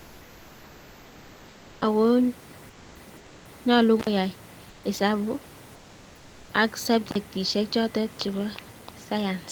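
Speech with two faults. In the pauses at 0 to 1.81 s, 2.69 to 2.95 s, 3.17 to 3.45 s, 4.69 to 4.83 s and 5.75 to 6.49 s, the room background turns flat and featureless, about 1 to 2 dB quieter. This is comfort noise in place of the background, likely from Opus DTX. Intermittent contact cuts the sound with crackle at 4.00 to 4.07 s and 7.09 to 7.16 s, just before "chotet chebo". The dropouts last about 48 ms and 44 ms.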